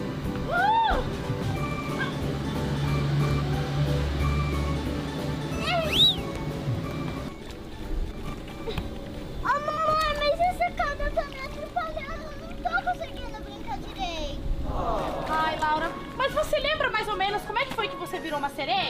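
Frames out of order at 8.11–8.31 s, 9.69–9.88 s and 12.15–12.28 s. Neighbouring blocks of about 80, 80 and 60 ms swap places, giving a garbled flutter.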